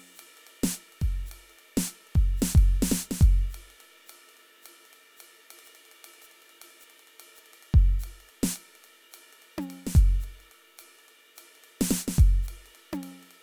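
No technical faults can be heard.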